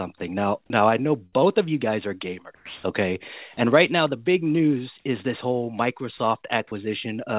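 Speech, carried over a call path band-limited to 4 kHz, has five short dropouts at 0.18–0.2, 0.66–0.7 (before "now I"), 2.55–2.83 (after "of you guys are"), 6.17–6.19 (after "news is this whole") and 6.67–6.71 s. The likely cause is sound dropped by the voice detector, with comfort noise filling in. On a waveform the speech envelope collapses to a thin, even noise floor. On a spectrogram the speech harmonics give way to flat, featureless low-level noise.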